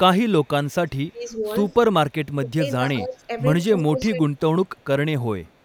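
There's a faint echo leak running through this one: a ghost copy of the speech trailing about 170 ms behind, at 0.44 to 1.11 s, 1.71 to 1.75 s, 3.78 to 3.83 s, 4.37 to 4.86 s and 5.44 s to the end. It sits very low, roughly 35 to 40 dB under the talker, likely a far-end loudspeaker echo the canceller didn't fully scrub.

Alongside that you get speech suppressed in double talk at 1.12 to 1.33 s, 2.4 to 3.29 s and 3.69 to 4.28 s. The voice ducks by around 10 dB in the first spot and closer to 15 dB in the longer two, likely the canceller clamping down because it mistook overlapping speech for echo.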